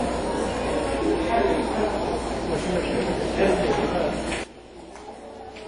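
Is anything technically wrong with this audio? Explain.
Yes, there are two faults. Throughout, WMA compression is plainly audible. Nothing is heard above 10.1 kHz. The sound rings and washes, which fits a low bitrate near 32 kbps.

At 4.44 s, a sudden gain jump drops the level by about 17 dB until the end. Sound and background fall together, likely from a gain change applied without a ramp.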